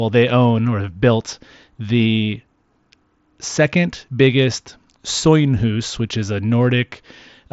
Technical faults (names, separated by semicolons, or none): none